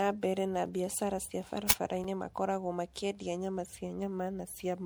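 Throughout the speech there is a swirly, hollow smearing, with consonant onsets blurred, which is more damage than a single 96 kbit/s MP3 encode would cause. This is generation loss, likely from about five successive MP3 passes, each quantising on a shifted frame grid so holes and noise accumulate.

From 1.70 to 1.72 s an uninitialised buffer plays: a 20 ms blast of loud digital noise, where stale memory was output as samples.

At 2.04 s a block of digital silence drops in for 5.8 ms, which fits a 256-sample buffer left empty. The signal snaps to zero and back with no fade, so the hole is heard as a brief tick from the two hard edges rather than a noise burst.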